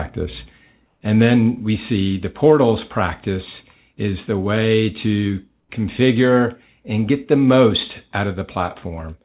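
At 0.86 to 1.01 s, and again at 5.60 to 5.69 s between "is the way to" and "configure and get the", the quiet background flattens into a smooth, textureless hiss about 2 dB lower for 150 ms and 90 ms. This is comfort noise in place of the background, likely from discontinuous transmission: during the pauses the sender stopped sending, and the receiver filled the gaps with synthetic noise. The audio is band-limited at 4 kHz throughout, which points to a narrowband telephone codec.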